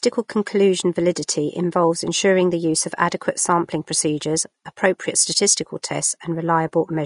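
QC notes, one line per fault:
Throughout: Vorbis compression, plainly audible across the speech, with a hissy, grainy top end, roughened tones and smeared consonant onsets. The treble sounds like noise standing in for lost detail, and the bitrate is likely around 35 kbps. Unlike band-limiting alone, the highs are rough rather than just dull.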